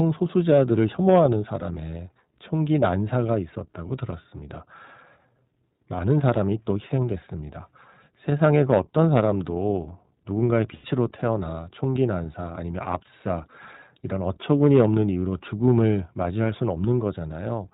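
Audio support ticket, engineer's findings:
iLBC codec, whole clip: band-limited narrowband speech, nothing above 4 kHz, plainly audible rough, synthetic texture. Consistent with iLBC at a rate that fits its 15.2 kbps, 20 ms mode. Distinct from plain low-pass filtering by the rough, synthetic texture of the coded excitation.

Lost iLBC frames, 10.74 to 10.86 s: 100 ms held, slightly buzzy vowel-like tone, which fits five missing 20 ms frames. The decoder repeats the last pitch cycle mixed with noise. Unlike a dropout, there is no silence, and unlike codecs with frame memory, speech recovers clean almost immediately.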